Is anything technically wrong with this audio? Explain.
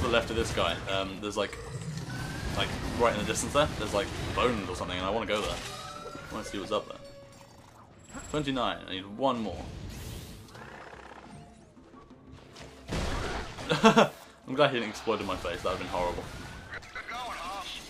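No, nothing technically wrong can be heard in this audio. There is no fault here to explain.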